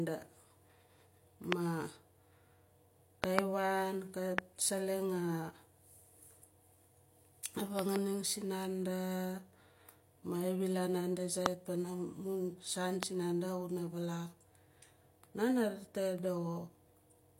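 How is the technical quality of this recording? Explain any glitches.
The speech in this recording is marred by a series of loud pops. Single sharp pops, about 25 dB above the speech, land at 1.52–1.54 s, at 4.38–4.41 s just after "wan kat", at 11.46–11.48 s between "xa wilaan naanda" and "pana mun saan sinanda", and at 13.03–13.05 s between "pana mun saan" and "sinanda xuna vaalak". Double pops occur at 3.24–3.41 s (about 25 dB) and 7.79–7.98 s (about 20 dB). The speech continues underneath each one. The likely cause is brief voltage spikes from a connector, switch, static or driver glitch that are added to the signal, with the following circuitry turning each spike into a short, hard click.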